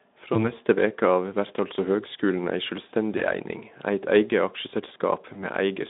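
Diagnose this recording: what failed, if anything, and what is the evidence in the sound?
The fault is at the network stage: VoIP packet loss concealed by the speech codec. It occurs at 0.33 to 0.50 s, just before "veke av vert altså", at 3.17 to 3.23 s, just after "vert altså høgskulen ei", and at 5.33 to 5.49 s. Each gap, about 20 ms of missing audio, becomes a short buzzy tone or coloured noise that fades. The decoder repeated its last pitch and filter at falling gain. Recovery lagged because each frame builds on the last.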